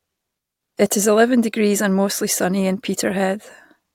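An intermittent contact fault hits this speech clip between 0.35 and 0.66 s. A loose cable or plug briefly loses its connection, and the signal drops out for about 222 ms within that window. Crackle marks the moments the contact breaks and remakes, and faint hiss remains while the line is open. The result is an abrupt hole in the speech, framed by scratchy clicks, rather than a smooth fade.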